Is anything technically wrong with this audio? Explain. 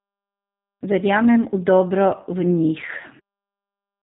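Yes, the speech carries G.729 codec damage throughout. An 8 kbit/s-style coder rebuilds it from a filter, pitch predictor and few pulses, so it sounds rough and synthetic with nothing above 4 kHz, not merely band-limited.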